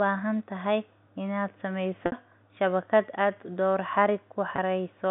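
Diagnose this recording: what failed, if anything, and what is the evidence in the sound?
A brief held, buzzy tone at 2.06–2.12 s and 4.56–4.58 s: network packet loss with pitch repetition, the receiver looping the last pitch period across 60 ms and 20 ms gaps.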